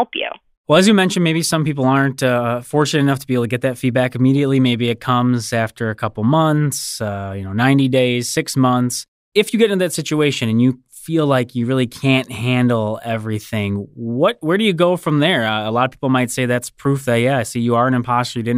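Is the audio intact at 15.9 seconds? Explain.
Yes, the audio is intact at 15.9 seconds, with no fault audible at that moment.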